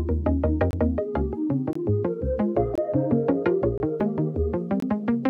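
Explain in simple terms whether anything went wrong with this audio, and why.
Gap between chunks: short, hard-edged 23 ms silences at 0.71, 1.73, 2.75, 3.78 and 4.80 s, where the one-second pieces of sound don't join up seamlessly.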